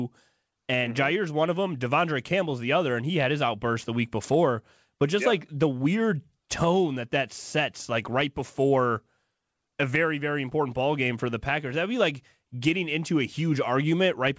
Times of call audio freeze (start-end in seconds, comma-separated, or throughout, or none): none